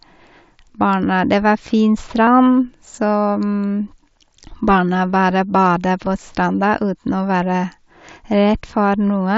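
Speech carried over a Bluetooth headset link shows concealed Bluetooth headset packet loss at 2.26, 3.51 and 6.06 s. Lost packets of about 15, 15 and 7.5 ms were filled by repeating recent waveform, so the single loss at 6.06 s is nearly hidden and the two-frame runs leave a brief buzzy tone instead of the silent gap or click of a plain dropout. The mSBC wideband codec carrying the audio adds only light graininess.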